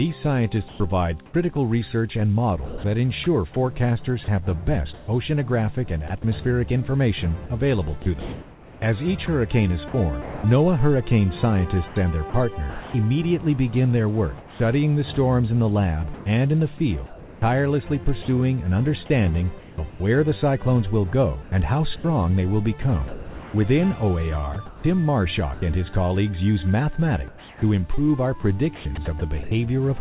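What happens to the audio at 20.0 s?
Just before 20.0 s, from 19.6 s, the background is replaced by comfort noise. For roughly 0.28 s the real ambience, with its texture and small movements, gives way to a flat, even hiss. The likely cause is discontinuous transmission. The sender stopped sending during what it judged a pause, and the receiver filled the gap with synthetic noise shaped to match the background. The effect is a smooth, lifeless patch instead of the room.

From 19.9 s to 20.0 s, the sound itself is dropped by the voice detector. About 70 ms of actual sound is lost, and that 0.1 s span plays as the same steady filler noise. The sender's detector likely mistook that quiet stretch for background and stopped sending it. The sound cuts away into hiss and only returns once the detector triggers again at 20.0 s. Throughout, the call path passes nothing above 4 kHz, which fits a narrowband 64 kbps telephone codec.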